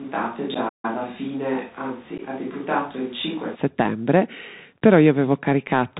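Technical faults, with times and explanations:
Throughout: Bluetooth CVSD headset codec. Nothing passes above 4 kHz, s sounds turn scratchy and loud bright moments distort as the one-bit delta steps fall behind, which fits a 64 kbps CVSD link. A spectrogram shows a hard ceiling at 4 kHz over a grainy hiss floor.
0.00–3.54 s: switch to a distant microphone. The speech is already roomy, hollow and thin in the bass from the start, about 5 dB quieter, with room noise roughly 25 dB below it, then snaps closer and fuller at 3.54 s. The likely cause is a fallback to a farther microphone. The waveform grows abruptly there.
0.54–0.56 s and 2.18–2.20 s: unconcealed Bluetooth headset packet loss. Each time about 11 ms of audio, a few packets, drops out, leaving a tiny abrupt hole before the sound resumes briefly quieter. The spectrogram shows narrow, sharp-edged vertical gaps and the waveform a flat notch.
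0.68–0.85 s: playback stall. The sound halts mid-flow for about 149 ms of silence, then carries on. The likely cause is the player running short of data or being blocked. The waveform shows a flat gap and the spectrogram a blank vertical band, both with abrupt edges.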